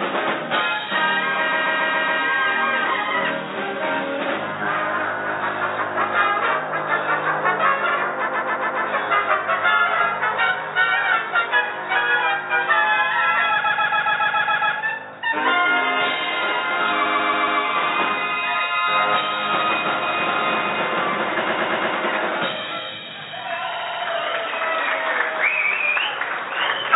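A stuttering loop at 1.51, 8.27, 13.63, 17.05, 21.48 and 23.73 s, where a short block of about 139 ms (116 ms and 70 ms in the last two) replays four to eight times. These are repeated frames: the same compressed frames were sent again, stretching the audio.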